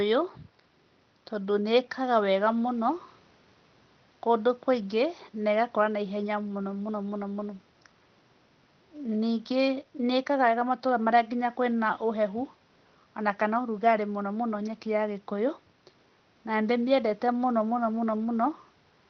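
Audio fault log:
No faults heard in this speech recording.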